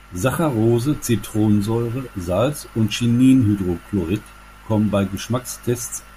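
Right from the start and running under the whole speech clip there's mains hum, a steady low drone sitting at 50 Hz with a few low harmonics stacked above it. Somewhere in the chain the power line leaked into the signal, most likely through a ground loop between pieces of gear or a transformer sitting too close to a cable. It's well below the speech, roughly 30 dB down, but it never lets up, so you notice it most in the pauses.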